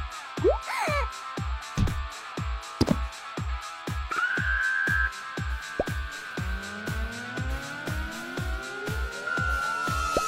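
Nothing goes wrong anywhere in this clip; there are no technical faults to point out.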